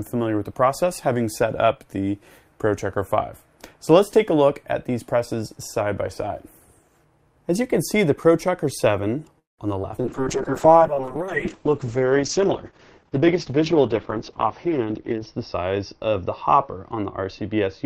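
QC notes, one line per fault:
9.39–10.07 s, repeated packet loss (robotic sound): four holes in under 0.7 s, the longest 190 ms, with about a third of the stretch patched by stretching the last sound forward. That's why it goes choppy, with 120 ms simply gone.
9.96–10.01 s, skip ahead: right inside that choppy patch, playback jumps forward by roughly 70 ms. Some audio got thrown out while later audio was already queued, so the two sides butt together with only a tiny 13 ms fill between them.
10.05 s to the end, call bitrate drop: the encoder gets squeezed from 48 kbps down to 7 kbps and sits at the bottom for about 5.3 s. Bandwidth falls from 20 kHz to 6 kHz, so it turns muffled and rough, and it never recovers before the clip ends.
10.21–12.18 s, jitter buffer slow-down: the receiver pads the audio by repeating tiny pitch-period chunks, adding 153 ms in total, so it plays at about 93% speed. 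Pitch stays put, but sounds get drawn out, maybe with a faint warble.
13.28–15.62 s, jitter buffer speed-up: now the opposite happens. With too much audio buffered, the receiver snips out short pitch-period pieces, roughly 200 ms' worth, and runs at about 108% speed. Same pitch, just noticeably hurried.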